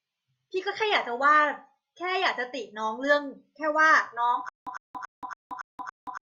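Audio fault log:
4.49 to 6.26 s, stutter with silent gaps: from 4.49 s to the end, the speech jams into a 102.5 ms burst that repeats six times, each followed by about 179 ms of dead digital silence, so it ticks along every 281 ms. Likely a stalled stream replaying its last fragment on each retry, with the real audio lost.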